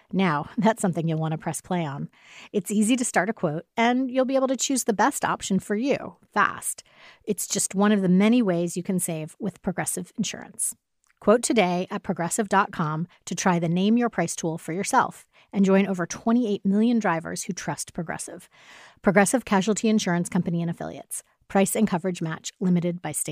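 A speech recording with no technical faults to report. Nothing in it calls for a time or a cause.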